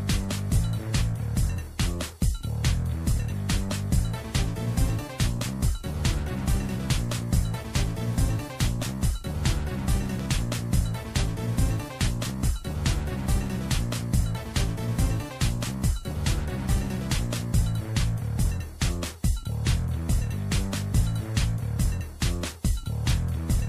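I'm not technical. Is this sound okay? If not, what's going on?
No. A loud pop occurs at 10.2 seconds: two sharp pops in quick succession, over by 10.36 s, a little louder than the sound itself, which carries on underneath. It's likely a sudden electrical jolt, from a plug, switch or static, that got into the signal.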